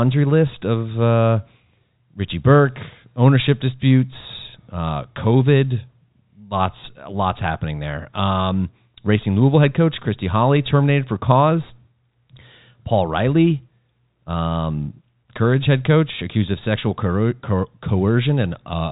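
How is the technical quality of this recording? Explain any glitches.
No glitches to report; the speech sits within the 4 kHz band of G.711 telephone coding, with no dropouts, clicks or breaks.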